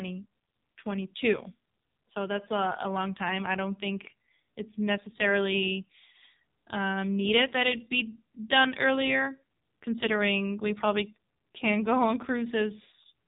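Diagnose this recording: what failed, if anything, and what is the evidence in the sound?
The codec stage failed: heavy AMR narrowband mobile codec damage runs throughout. The speech sounds buzzy and synthetic, and a spectrogram shows a hard ceiling at 3.8 kHz with nothing above it. Pulse-driven vocal-tract modelling this coarse points to a low AMR-NB mode, around 6 kbps.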